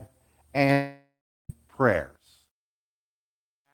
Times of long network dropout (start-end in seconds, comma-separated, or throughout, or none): 0.72-1.50